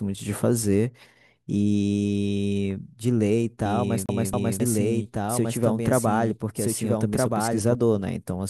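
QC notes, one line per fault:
3.66–7.75 s: doubled audio track. A dry copy trails about 1.5 s behind at roughly equal level. It is likely a second, slower capture path.
4.06–4.60 s: CD stuck on one turn. The same 0.27 s segment repeats twice with a brief mute at each jump, giving an even, skipping stutter.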